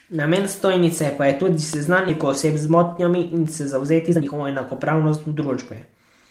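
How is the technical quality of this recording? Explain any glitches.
The recording has two timing faults.

At 2.09 to 2.11 s, just after "stojnice pa je tudi", there is a skip ahead. A stretch of audio was dropped, either on the way or by the jitter buffer, while later audio was already queued, so roughly a second of speech was thrown away rather than played late. Nothing fills the gap, so the speech before and after the cut is joined almost seamlessly, and the listener hears an abrupt jump with words missing.

From 2.25 to 5.45 s, a jitter buffer speed-up follows. The buffer was still holding more audio than its target, so the receiver repeatedly cut out short slices, each one or a few pitch periods long, removing about 0.4 s in total. The pitch stays the same, but the speech runs at about 113% of normal speed and sounds noticeably hurried through this stretch.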